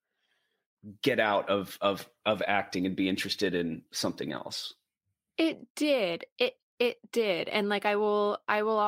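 No technical faults are audible.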